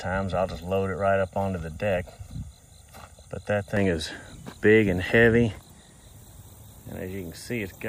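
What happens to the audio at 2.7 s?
At 2.7 s the sound is inside a stretch of channel delay (comb filtering) running from 0.0 to 3.77 s. One channel lags by roughly 1.5 ms, and the mono sum cancels at evenly spaced notches starting around 300 Hz, giving a hollow, phasey tone. Unlike flanging, these notches stay fixed rather than sweeping.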